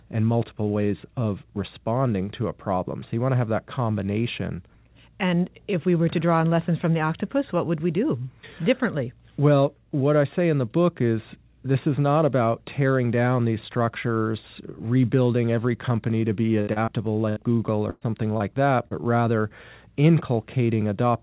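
Just after "every company to be", a burst of packet loss from 16.61 to 16.70 s drops about 60 ms of speech. The receiver stretches the last sound into a fading buzz or hiss, then jumps ahead with that stretch missing. Two short concealed packet losses follow at 16.73 to 16.79 s and 16.85 to 16.90 s. Each loses about 30 ms, too brief for a held tone, so it comes across as a quick smear or wobble as the synthetic fill blends back into real audio. Bursts recur at 17.29 to 17.39 s (about 60 ms lost) and 17.90 to 18.04 s, the longest at about 120 ms, where the decaying continuation comes before the speech skips forward. Short concealed losses at 18.37 to 18.43 s and 18.88 to 18.94 s again cause only a wobble, perhaps swallowing a consonant. Throughout, the call band stops at 4 kHz, which fits a G.711 codec.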